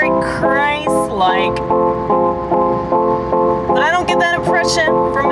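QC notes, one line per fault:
Nothing here needs flagging; the audio comes across with no faults to log.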